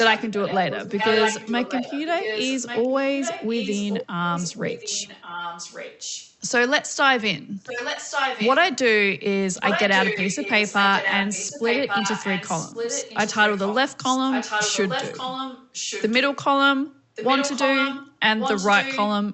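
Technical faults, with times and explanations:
0.0–6.35 s, 7.6–8.55 s, 9.56–16.38 s and 17.15–19.33 s: echo leak. A copy of the speech returns 1.14 s late, about 10 dB below it at first and about 5 dB below later. The likely cause is a far-end loudspeaker whose echo canceller let its microphone pickup back into the call, within the call path's 8 kHz band.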